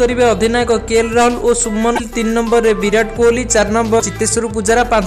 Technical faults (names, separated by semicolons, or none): damaged data in a compressed stream